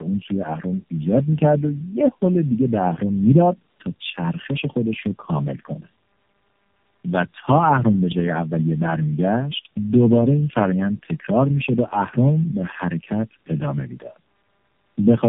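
Tandem speech coding throughout: three low-rate speech codecs in a row each recoded the previous one's damage, leaving rough, warbly speech with nothing above 3.7 kHz.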